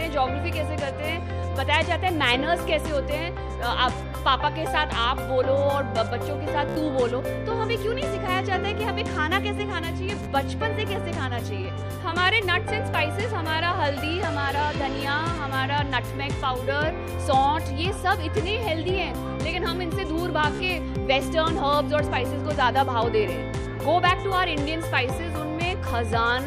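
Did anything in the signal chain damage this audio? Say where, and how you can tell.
Yes. The damage happened at the wireless link, a Bluetooth stutter heard three times: 6.69 to 6.76 s (72.6 ms lost), 10.23 to 10.26 s (29.0 ms) and 20.55 to 20.60 s (43.5 ms). Packets arrived late or not at all, so the receiver replayed its last short buffer, which gives a brief buzzing repeat before the sound jumps ahead. On a waveform, each spot is an identical slice tiled end to end. A spectrogram shows vertical striping at the loop rate with a discontinuity at the resume.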